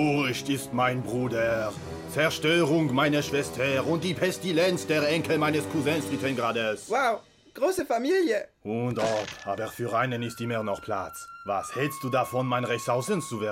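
At 7.77 to 7.79 s a corrupt frame decoded produces a brief chirp-like blip: damaged bits in roughly a couple of compressed frames were played anyway, misplacing energy. A spectrogram shows a narrow vertical smear at odd frequencies; the waveform shows a short, jagged burst.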